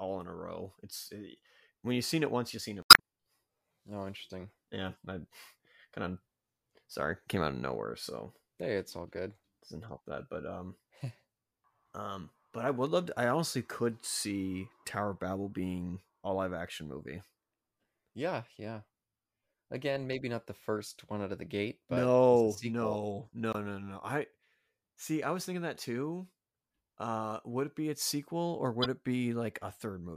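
At 2.81 to 3.00 s, 23.51 to 23.57 s and 28.82 to 28.86 s, damaged data in the compressed stream makes the decoder lose sync and resync, producing brief chirps, squawks, clicks or short holes: jagged waveform breaks.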